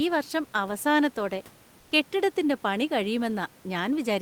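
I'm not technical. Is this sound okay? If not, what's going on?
No. Comfort noise in place of the background appears from 1.79 to 1.91 s, just after "ഈ വർഷം അവസാനത്തോടെ". For about a tenth of a second, the real room noise behind the speech is replaced by a smooth, even hiss that is a little quieter. This likely comes from discontinuous transmission. The sending side briefly stopped sending sound during a pause, so the receiving side filled the gap with artificial noise shaped to resemble the room.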